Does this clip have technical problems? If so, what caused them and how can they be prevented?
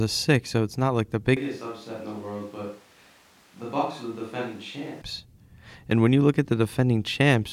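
Yes. From 1.37 s to 5.02 s the speech suddenly turns roomy and hollow, loses bass, and drops by about 10 dB. Background noise rises to roughly 25 dB below the speech. At 5.02 s the close sound returns just as abruptly. This is likely a switch to a distant microphone. The close microphone dropped out, so a mic further away carried the room's reflections and noise. Monitor the close mic's signal and connection during recording, and keep a backup lavalier running.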